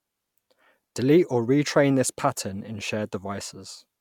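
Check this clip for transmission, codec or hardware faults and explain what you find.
Nothing in the speech stood out as a fault on listening.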